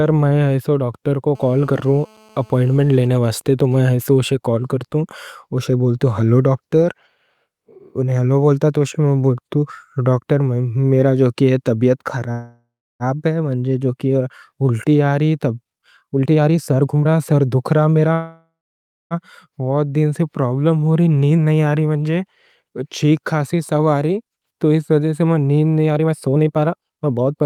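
From 1.35 to 3.07 s a GSM phone buzz sits about 32 dB below the speech. A nearby 2G handset in a call is transmitting 217 times a second, and the audio circuitry rectifies each radio pulse into a hard, raspy buzz. A spectrogram shows a steady 217 Hz comb of harmonics running straight through the speech.

GSM signalling bursts follow at 3.17 to 4.02 s, roughly 30 dB down. The handset's user has fallen silent, so the phone sends only occasional groups of bursts. The result is even ticks with a longer buzz twice a second, seen as short vertical clusters of the same harmonic comb.

A call audio freeze runs from 12.31 to 13.03 s, likely because packets were held up and the jitter buffer ran dry. The last sound is stretched into a fading buzz or hiss, filling about 685 ms and ending in 310 ms of silence. Speech then resumes where it stopped, with nothing lost. The waveform shows a decaying smear and a flat gap.

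A jitter buffer speed-up at 15.64 to 18.07 s plays the speech at 126% of normal speed with the pitch unchanged. The receiver is draining excess buffered delay by cutting out pieces of one or a few pitch periods, roughly 0.7 s in total. Speech sounds hurried, and the spectrogram shows syllables compressed closer together.

A second call audio freeze at 18.13 to 19.14 s has the same likely cause. It fills about 979 ms, fading into 580 ms of silence before the speech picks up again intact.

Two more speed-ups follow. The first runs from 20.88 to 24.52 s at 109%, removing around 0.3 s. This is a mild rush. The second runs from 25.86 to 27.42 s at 136%, removing about half a second. Here the speech is noticeably hurried and pressed together.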